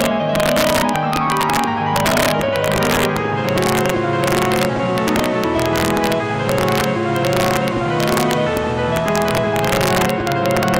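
All the way through there's integer overflow: driven about 4 dB too hot, roughly half a percent of samples go past the limit and wrap to the opposite sign, giving harsh cracks on loud moments.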